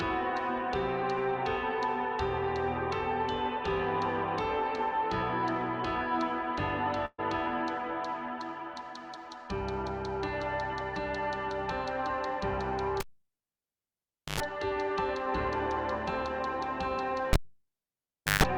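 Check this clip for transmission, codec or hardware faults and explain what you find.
Three faults are present: one burst of packet loss and two instances of a cable being pulled and plugged back in.

At 7.05 to 7.20 s, a burst of packet loss removes about 120 ms of audio. The receiver concealed the gap by extending the last sound for 128 ms while fading it out, so it trails off into about 30 ms of silence before resuming further ahead. On a spectrogram this appears as smeared, flattened bands that fade out before an abrupt restart.

From 13.00 to 14.40 s and again from 17.33 to 18.44 s, the cable is pulled and plugged in. Each event opens with a pop, followed by near silence for about 1.35 s and 1.05 s respectively. As the plug reseats, 50 Hz mains buzz sounds for about 100 ms and 150 ms, then a second pop marks the return of the audio. A waveform shows spikes at both ends of a flat gap, and a spectrogram shows 50 Hz harmonic lines just before the sound resumes.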